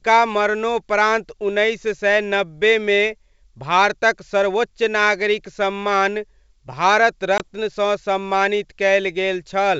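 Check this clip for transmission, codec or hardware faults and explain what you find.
One transmission fault stands out, in this G.722 wideband speech, which carries its light upper-band hiss with no lower-band noise, consistent with the full 64 kbit/s mode.

Packet loss on an ADPCM call, 7.38 to 7.41 s, right after "नागरिक सम्मान भारत": a hard-edged 20 ms hole, about one packet, where the decoder's predictor loses sync. What sets it apart from a plain dropout is that the sound returns slightly distorted before settling.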